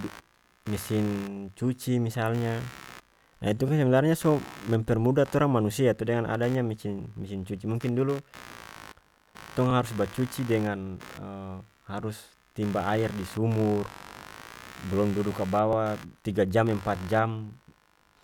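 The speech recording picks up computer activity noise: load changes in the processor, graphics card or mouse disturb the audio circuit's shared ground. This adds a buzzing, chirping hum pulsing roughly 70 times a second, sitting about 20 dB below the speech throughout. The audio was also processed in overlapping chunks, with each 6-second block starting 23 ms before the previous one ended. That 23 ms repeats at each join, causing a brief stutter at 3.68 s (after "ah itu", before "kan sebenarnya so mempermudah"), at 9.71 s (before "harus bacuci dengan"), and at 15.73 s (between "blom dudu" and "tiga jam").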